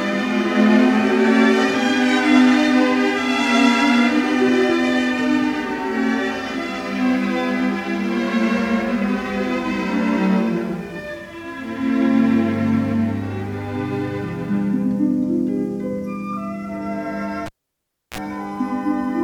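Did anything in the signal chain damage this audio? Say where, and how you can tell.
Yes. At the analogue wiring stage, a cable was pulled and plugged in again between 17.46 and 18.18 s. A pop opens the event, the signal drops to near silence for about 0.67 s, then a 38 ms burst of 60 Hz mains buzz sounds as only the tip connects, and a second pop marks the return. On a waveform, two sharp spikes bracket a flat stretch. On a spectrogram, broadband vertical lines frame a brief 60 Hz harmonic stack.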